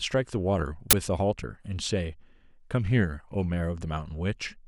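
At 0.91 to 0.93 s the speech is broken by an uninitialised buffer: a block was sent to playback before any audio filled it, so stale memory came out as samples. It is heard as a brief, loud burst of digital noise lasting about 23 ms, which fits a 1024-sample buffer.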